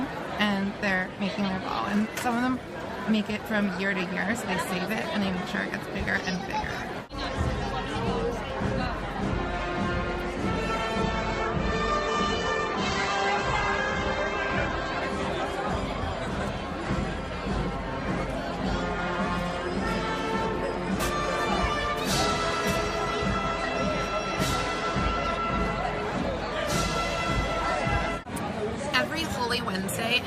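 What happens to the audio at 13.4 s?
At 13.4 s the adaptive stream is at a lower bitrate (11.02–15.02 s) after the connection slowed: nothing above 8.2 kHz, harsher artefacts, yet no gap, unlike a dropout.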